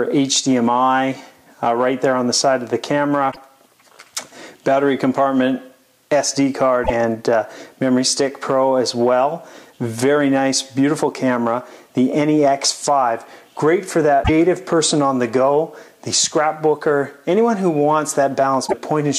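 Damaged data in a compressed stream breaks the decoder's reading of frames four times, at 3.28–3.38, 6.81–6.90, 14.20–14.30 and 18.64–18.74 s. Each time it misreads the corrupted bytes and hunts for the next frame header, leaving a brief chirp or blip of about 0.1 s.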